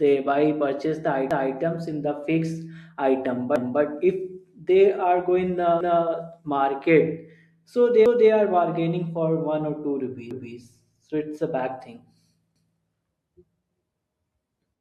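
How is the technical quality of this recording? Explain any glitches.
The speech has a recurring stutter from overlapping chunks. At 1.31, 3.56, 5.81, 8.06, 10.31 and 12.56 s, a 250 ms piece plays twice. Each 2-second chunk starts before the last one ends, so every join repeats audio. One example follows "so they", just before "are bargaining".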